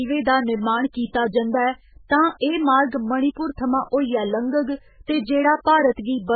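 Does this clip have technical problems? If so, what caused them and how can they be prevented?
Yes. Heavy MP3 compression, likely the cause, runs throughout: nothing above 4.5 kHz survives, and weak frequency lines flicker, giving watery, swirly speech that fits a very low bitrate near 8 kbps. Prevent it by encoding at a much higher bitrate or keeping an uncompressed master.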